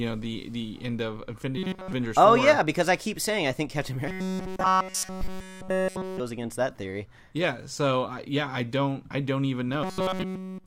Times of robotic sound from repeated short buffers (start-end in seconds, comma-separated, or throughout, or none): 1.58-1.92, 4.08-6.20, 9.83-10.66